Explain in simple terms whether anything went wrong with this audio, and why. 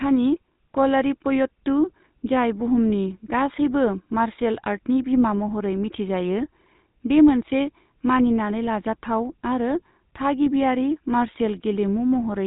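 From the first second to the last, the speech sounds buzzy and gravelly, and oddly muffled because nothing above about 3.8 kHz gets through. That is the GSM full-rate codec: an early phone coder that rebuilds speech from a rough model of the throat and a sparse pulse train.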